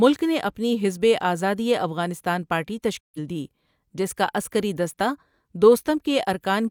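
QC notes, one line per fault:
3.00–3.19 s, digital broadcast dropout: The speech fades to silence in about 8 ms right after "افغانستان پارٹی". It returns at "دی جس کا عسکری". The receiver muted while frames failed. About 128 ms of programme is gone, which fits three lost frames.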